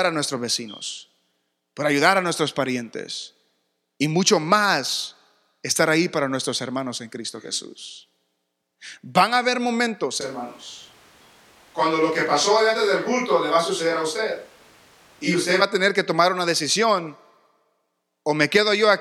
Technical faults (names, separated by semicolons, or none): switch to a distant microphone